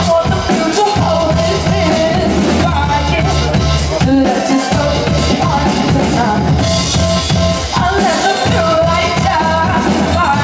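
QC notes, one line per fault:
Throughout, gain pumping: the level keeps swinging by roughly 5 dB, so loud and quiet moments sit closer together and everything feels a bit squashed. That's likely the input gain set way too hot with a fast limiter or compressor clamping down on every peak. The top end also stops around 8 kHz, as a wideband call path would.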